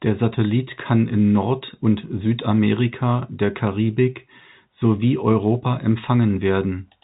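No technical faults are audible.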